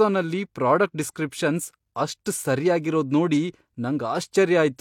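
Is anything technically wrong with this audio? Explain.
Yes, there is a pre-echo at about 2.24 s, between "ಪ್ರಾಡಕ್ಟ್ ಡಿಸ್ಕ್ರಿಪ್ಷನ್ಸ್" and "ಸರ್ಯಾಗಿರೋದ್ ನೋಡಿ". The codec spread noise sized for a sharp speech onset across its whole block, so a short hiss of about 16 ms leads the attack and blurs it. On a spectrogram this shows as a broadband smear just before the onset, and on the waveform as low-level fuzz ahead of the transient.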